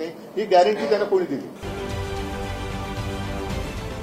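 Timecode bleed: linear timecode at 30 frames per second leaks in from 1.56 s to the end, adding a chirping warble near 1 and 2 kHz, about 25 dB down.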